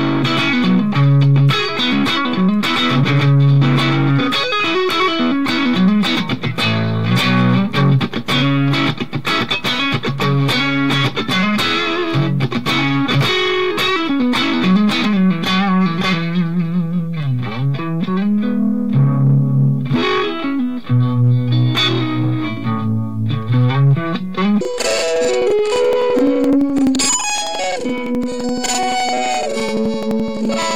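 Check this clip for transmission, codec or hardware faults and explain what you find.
One fault: planar audio read as interleaved, from 24.61 s through to the end. Each block holds all its left samples followed by all its right samples, but the player treats it as alternating pairs, so every block plays twice at double speed, first left then right. The blocks run about 85.33 ms, which fits 4096-sample blocks, so the sound jumps a full octave up and flutters at roughly 11.7 Hz.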